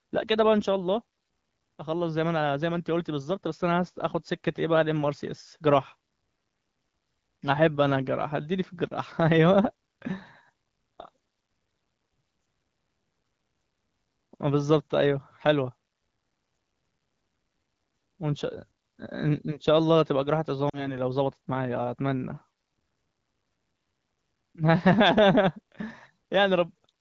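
At 20.69 s, radio errors corrupted speech frames so they failed their checksum, causing lost AMR speech frames. The AMR-WB decoder filled the roughly 40 ms gap by repeating its last good settings at falling gain. The speech dips toward near silence before returning weak or rough by 20.96 s.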